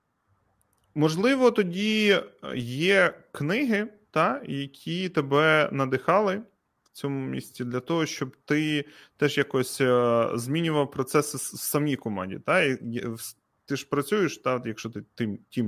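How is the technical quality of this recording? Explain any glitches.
The technical quality of this recording is sound, with no glitches to explain.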